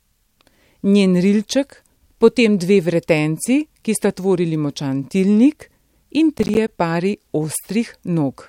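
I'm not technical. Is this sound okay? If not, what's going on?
No. From 6.38 to 6.68 s the speech breaks into a short burst of crackle. This is processor overload crackle. The computer plays sound in tiny chunks, each roughly a hundredth of a second long. Here it got too busy and missed around ten of those chunks over that stretch. Each miss left a brief hole of silence with sharp edges. Those holes, packed close together, sound like gritty tearing. It stops once the computer catches up.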